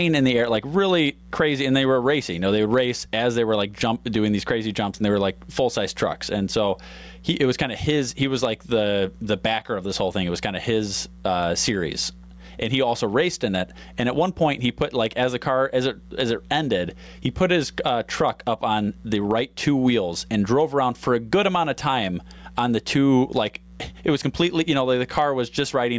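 Gain pumping runs through the whole clip. The gain swings by around 15 dB. The likely cause is input gain set far too high, with a fast limiter clamping every peak. The speech sounds squashed and flat, over a call's band-limited tone that stops near 8 kHz.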